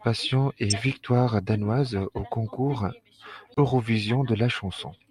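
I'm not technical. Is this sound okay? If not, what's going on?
No. There are two faults.

At 0.70 to 0.73 s, just before "victoire danoise", there is a corrupt frame decoded. A small piece of the compressed data was damaged, but the player played it anyway. You hear a short, harsh blip or chirp that doesn't belong to the speech.

At 3.52 to 3.59 s there is a corrupt frame muted. Damaged data was thrown out and silence was put in its place. The speech cuts out suddenly for a split second, a gap that fits about two frames. Nothing after it is shifted in time.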